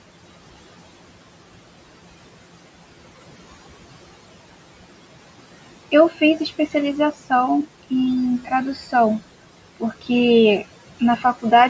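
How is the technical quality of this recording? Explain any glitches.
The recording has two kinds of noise-suppression glitches.

Noise suppressor artifacts run through the whole clip. The room noise, about 17 dB below the speech, dips in the pauses and swells back under the talking. This happens because the suppressor cuts bands it judges to be steady noise by about 17 dB, frame by frame. The audio also stops at 8 kHz, as expected from call microphone processing.

Speech cut by the noise suppressor occurs at 6.1–6.22 s, 8.75–8.94 s, 9.8–10.1 s and 11.0–11.24 s. In each spot, bits of speech sound swallowed and faint, losing around a tenth of a second in total. The suppressor mistook these quiet parts for noise and pulled them down by about 12, 8, 13 and 10 dB.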